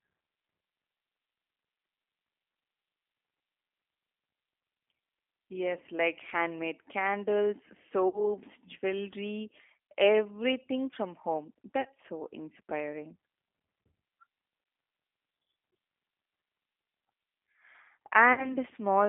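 From the first second to the last, the speech passes through a G.729 codec at 8 kbit/s, squeezed into a line band of roughly 250 Hz to 3.5 kHz. A spectrogram shows nothing above 3.5 kHz and little below 250 Hz. The damage is plainly audible. Each 10 ms frame is rebuilt from a vocal-tract filter, a pitch predictor and a few pulses, so the voice sounds rough and slightly synthetic.

On top of this, VoIP packet loss concealed by the speech codec breaks in five times. The first runs from 8.08 to 8.26 s, after "like handmade candles" and before "jewelry everything from home". About 60 ms of audio is missing, which fits three lost 20 ms packets. Brief dropouts follow at 9.87 to 9.89 s, just before "everything from home", and at 14.64 to 14.66 s, each about 20 ms. Two longer ones of about 40 ms each occur at 11.81 to 11.90 s, between "jewelry everything from home" and "so inspiring", and at 18.33 to 18.56 s.

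Each time, the decoder stretches the last pitch and filter state into a buzzy tone or a coloured noise with falling gain. On a waveform this shows as a repeating, decaying pattern in place of natural speech. On a spectrogram it appears as frozen, blurred harmonics or noise that fade out. Because each frame builds on the previous one, the voice stays weak or distorted for a short while after packets resume.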